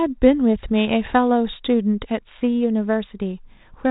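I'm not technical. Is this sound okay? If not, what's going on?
Yes, nothing stood out as a problem when listening to this speech recording.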